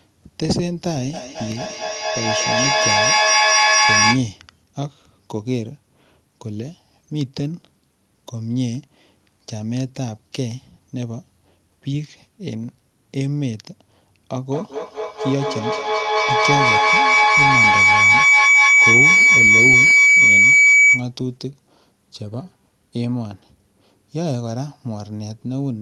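From 1.13 to 4.29 s there's a feedback echo between two devices. Two devices on the same call are sharing a room, so one device's microphone picks up the other's loudspeaker, and neither echo canceller removes sound it didn't play itself. Every syllable comes back roughly every fifth of a second, thinner and ringier each pass. Instead of dying away, the repeats stack up until they peak at about 7 dB above the speech.

At 14.52 s the audio tips into a full feedback howl, which runs until 21.11 s. Each trip from microphone to loudspeaker and back now gains level, so the repeats grow rather than fade and collapse onto a narrow tone at roughly 2 kHz, the frequency the loop favours. The howl climbs to about 10 dB over the speech before it stops.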